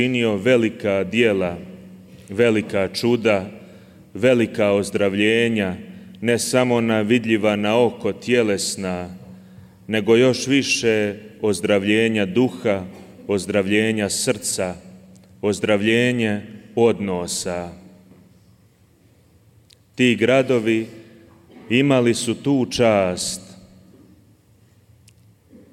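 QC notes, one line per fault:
14.76–25.73 s, crude rate conversion: a gritty, inharmonic fizz trails the louder and brighter sound, sitting roughly 35 dB under it. This fits a 44.1 kHz to 48 kHz change done by linear interpolation without filtering, leaving shifted, inharmonic copies of the content.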